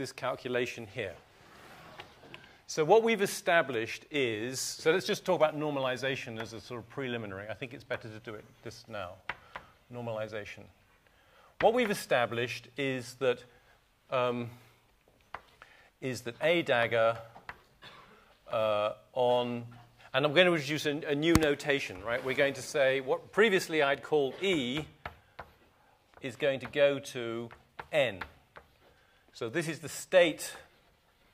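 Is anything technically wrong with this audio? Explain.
No, nothing technically wrong can be heard here.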